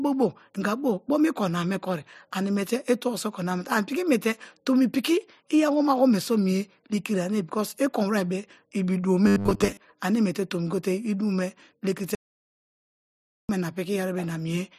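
A speech clip with two faults. From 9.27 to 9.79 s the voice collapses into a stiff, metallic drone pitched at 100 Hz that loosely tracks the speech. This is robotic sound from repeated short buffers. Audio was most likely arriving too late, so playback kept looping the last chunk, and a 100 Hz buzz points to a chunk about 10 ms long. Most of the real audio in that half-second was skipped rather than heard. Then from 12.15 to 13.49 s the sound cuts abruptly to dead silence, with no room tone at all, before resuming mid-flow. That is an audio dropout to silence: roughly 1.34 s of input was lost, likely through a broken link or interrupted capture, while silence was written in its place, so whatever was said then is gone.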